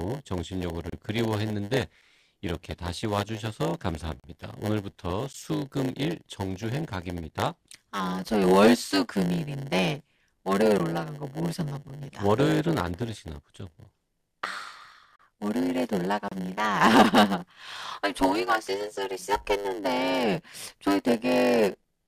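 From start to finish there is a block size mismatch (padded). One stage writes shorter blocks than the next one reads. Zeros fill the remainder of each block. That leaves a steady buzz at 100 Hz. The speech runs at 0.919 times normal speed, yet keeps its timbre.

Gaps between stream segments also appear, at 0.90 to 0.93, 2.01, 4.20 to 4.24, 5.33, 10.78, 11.89, 15.16 to 15.19 and 16.28 to 16.32 s. Timestamps of adjoining 1-second segments leave holes. The player pads them with silence. Each is a hard-edged dropout lasting 7 to 38 ms. No audio goes missing.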